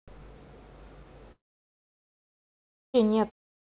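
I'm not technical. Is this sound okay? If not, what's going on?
No. At 1.32 s the speech cuts out, and nothing comes back until about 2.96 s. That is a gap of roughly 1.6 seconds. This sounds like a long network dropout: the audio likely stopped arriving over the connection. The last sound trails off very briefly, and then there is only silence. When the speech returns, the missing part is simply gone. The lost audio was never played.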